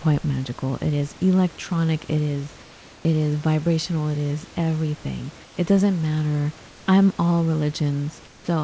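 Speech clip in which the room background, sitting about 26 dB below the speech, is replaced by comfort noise during four pauses: 2.63–3.05 s, 5.45–5.57 s, 6.68–6.86 s and 8.27–8.48 s. In each gap the textured background becomes a flat, featureless hiss, about 2, 3, 2 and 6 dB quieter respectively. This is likely discontinuous transmission, with the receiver synthesising noise while the sender, its voice detector hearing no speech, stops transmitting. The band stops at 8 kHz, consistent with a wideband call codec such as G.722.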